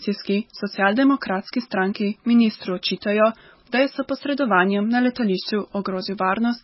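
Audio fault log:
Throughout: MP3 compression, heavy; treble cut off above 5.6 kHz and watery, swirly sound from flickering weak frequency lines, likely a starved bitrate near 16 kbps.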